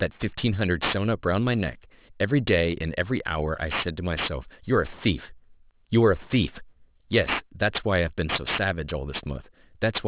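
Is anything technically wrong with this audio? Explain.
Yes, aliasing runs through the whole speech clip. The sample rate was cut, consistent with a drop from 24 kHz to 8 kHz, without a filter. Content above 4 kHz mirrors back below it, roughly 10 dB below the signal, making sibilants gritty and metallic rather than simply muffled as clean band-limiting would.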